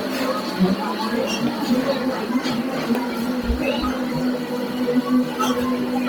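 From the first moment to the end, a noise suppressor applied to music or sounds is working on this everyday audio. A processor built for speech is treating sustained tones, ambience and decay as unwanted noise, so each attack passes but what follows sinks by roughly 5 dB before recovering. The result is a thinning, breathing level. Unlike a compressor's pumping, which follows overall loudness, this loss targets steady, tonal and reverberant content while transients stay intact.

Running alongside it for the whole clip is heavy coding damage that gives tonal parts a breathy, grainy edge. The upper spectrum sounds hollowed and refilled with hiss rather than smeared, though content still reaches about 20.2 kHz. This is likely Bluetooth LC3 compression at a low rate, around 32 kbps with 10 ms frames. The noise-filled high band sets it apart from the swirly, metallic artefacts of other low-bitrate codecs.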